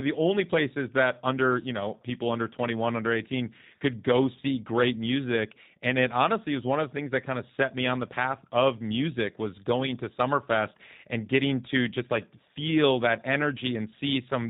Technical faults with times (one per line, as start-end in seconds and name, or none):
0.00-14.49 G.729 codec
3.61-3.64 VoIP packet loss concealed by the speech codec